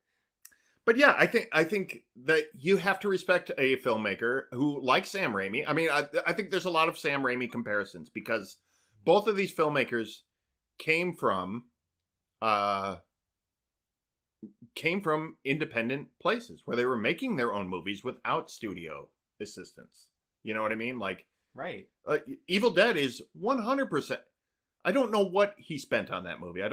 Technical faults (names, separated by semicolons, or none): call bitrate drop